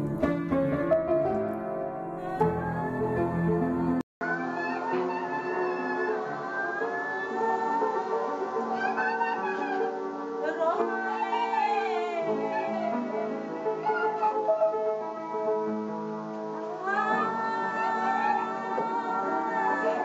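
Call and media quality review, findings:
At 4.01 s, a 200 ms gap, then the sound goes duller through the end; nothing above 7.6 kHz and a new noise floor about 30 dB below the signal, level unchanged. Likely an input switched to a poorer device; the gap and changed noise, unlike a plain codec bandwidth drop, point to a capture-side change.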